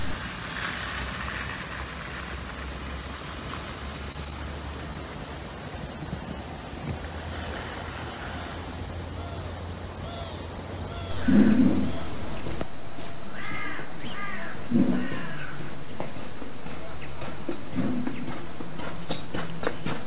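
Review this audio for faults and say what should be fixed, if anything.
Between 4.12 and 4.97 s the sound picks up a cluster of brief ticks and small smears, about four in all. These are scattered short gaps: packets arrived late or not at all, and the receiver patched each hole by extending the sound just before it. The patches add up to roughly 70 ms, with none much longer than 20 ms, so about 7 percent of that stretch is filler. A larger jitter buffer or forward error correction on the sending side would keep these packets from being lost in time.

At 6.03 to 6.07 s there is a single short wobble where the sound briefly blurs before settling back. This is short concealed packet loss: about 20 ms never reached the decoder, and 18 ms of it was filled by continuing the preceding sound, pitched if voiced or as shaped noise if not, then cross-faded into the real signal. Packet redundancy or retransmission on the link would prevent this dropout.

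Throughout, nothing is heard above 4 kHz, which points to a narrowband call codec such as G.711.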